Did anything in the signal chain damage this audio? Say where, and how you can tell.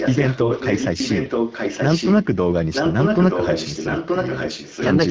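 Yes. Echo leak in call processing: from 0.0 to 2.25 s and 2.73 to 4.88 s the speech repeats 925 ms later, about 5 dB quieter, likely because an echo canceller left loudspeaker pickup in the signal.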